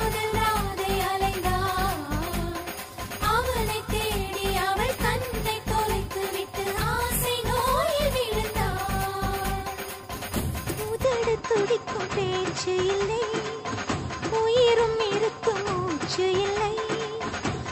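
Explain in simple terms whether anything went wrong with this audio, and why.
At 11.04 s the sound abruptly turns duller and boxier and stays that way to the end. The loudness doesn't jump, there's no gap at the change, and only faint new background noise appears. Everything above about 8 kHz simply vanishes. The likely cause is an input switched to a poorer device: the recording moved mid-stream to a lesser microphone or a headset's call mode, which passes a narrower range of frequencies and loses the crisp top end.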